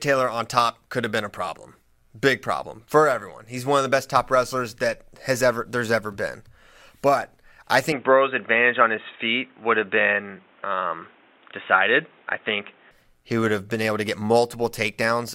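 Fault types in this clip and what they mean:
Input switched to a poorer device: at 7.92 s, just before "he would have been", the speech abruptly turns dull and boxy with nothing above 3.8 kHz, a level change of a few dB and a faint new noise floor, with no gap, until 12.91 s. This likely reflects a move to a lower-grade input.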